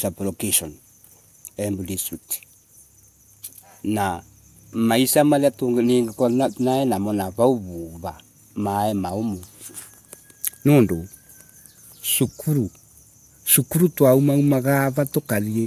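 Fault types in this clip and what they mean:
Nothing stood out on listening to this speech recording.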